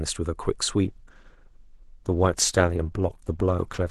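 An adaptive stream at a lower bitrate takes over at 0.84 s and lasts to the end of the speech. The connection seems to have slowed, so the player switched mid-stream to a cheaper encoding. The jump is abrupt but seamless, with no gap. From that point coding artefacts become audible. The loss of detail fits a move from roughly 64 kbit/s Opus down to about 12 kbit/s.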